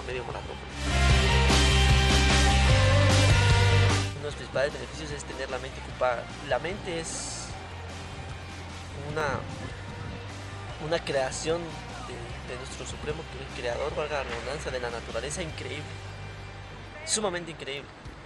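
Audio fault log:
0.65–17.77 s, clock drift buffer slips: about fifteen short clicks recur every 1.07 s wherever signal is present, likely from two mismatched clocks (roughly 300 ppm apart) letting the buffer drift until a block, suggesting around 15 samples, is dropped or repeated.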